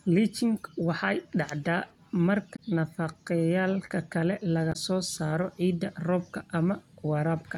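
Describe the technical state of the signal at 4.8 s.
Right at 4.8 s the sound has just come out of a short burst of damaged data in the compressed stream, running from about 4.69 to 4.76 s. Corrupted bytes there throw the decoder off sync until it finds the next good frame, leaving a brief glitch just before "soo saaro ciidda".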